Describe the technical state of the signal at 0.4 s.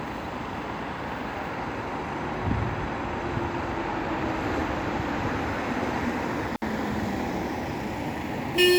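At 0.4 s the signal is intact, with no dropout, clipping, glitch or other audible fault at that moment.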